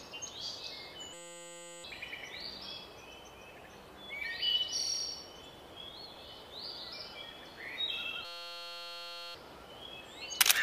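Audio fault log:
1.14–1.84 s and 8.25–9.35 s, system hang loop. A 5.8 ms slice repeats as a steady 172 Hz buzz, which fits a frozen 256-sample buffer. Each hang loses up to a second of audio.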